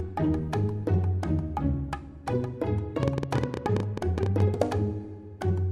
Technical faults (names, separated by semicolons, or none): train of clicks